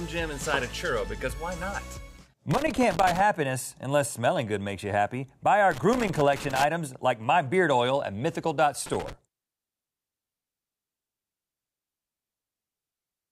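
Irregular bursts of scratchy crackle break up the sound from 2.51 to 3.20 s, from 5.71 to 6.64 s, and briefly from 8.86 to 9.13 s. This is loose connector crackle: a worn or dirty contact rapidly making and breaking, chopping the signal.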